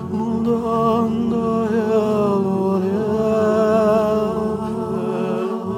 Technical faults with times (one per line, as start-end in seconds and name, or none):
none